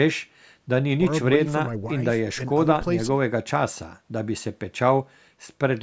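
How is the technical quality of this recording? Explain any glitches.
No glitches can be heard in the recording. The speech has passed through a call's microphone processing, which takes out the lowest bass and leaves nothing above 8 kHz, and that is normal behaviour for such a path.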